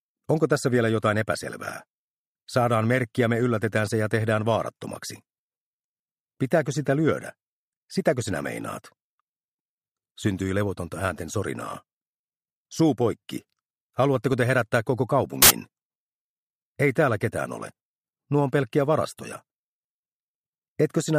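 At 15.42 s the audio breaks into loud, harsh noise for about 80 ms, ending at 15.50 s. This is a case of samples built from the wrong bytes: the reader assembled each sample from a misaligned or swapped byte pair, so the rapidly fluctuating low-order bits landed in the most significant position. The result is a short, harsh burst of broadband hiss that replaces the sound entirely for that span.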